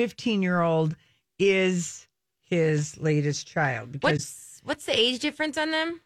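At about 4.17 to 4.20 s there's a corrupt frame concealed in the speech. Corrupted bits got caught by the decoder, which patched over the gap itself. It covers one frame, about 0.03 s.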